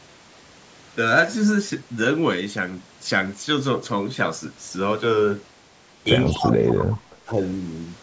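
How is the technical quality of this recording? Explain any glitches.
The recording has two call-related glitches near the end, both packed between 6.26 and 7.3 s, with the audio band-limited to 8 kHz by the call's microphone processing.

Echo leak, 6.26 to 6.35 s and 6.93 to 6.97 s: the far end's echo canceller likely failed to remove everything its microphone picked up from the loudspeaker. Faint scraps of the voice return 201 ms late, about 20 dB below the speech, short.

Speech suppressed in double talk, 6.33 to 7.04 s and 7.25 to 7.3 s: with both sides active, the echo canceller likely could not tell the talker from the echo and turned both down. The voice sinks by up to roughly 25 dB in the first stretch, then dips briefly by about 10 dB.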